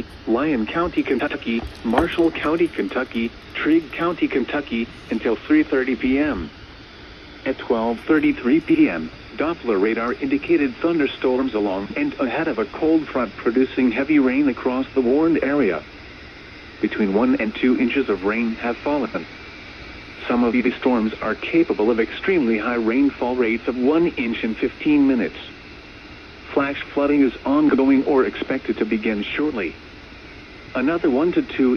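Frames out of order at 1.19, 8.69, 11.85, 16.54, 19.05, 20.53 and 27.69 s: adjacent blocks of 23 to 93 ms swap places, giving brief garbled flutters.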